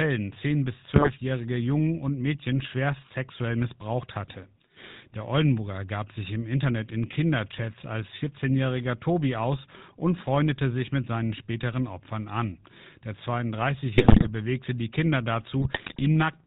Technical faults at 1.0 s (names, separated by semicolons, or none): GSM full-rate codec; GSM bit errors